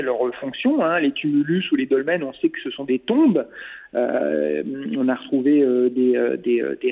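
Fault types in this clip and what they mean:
Nothing stood out on listening. The sound comes over a standard call path, with nothing heard above about 4 kHz.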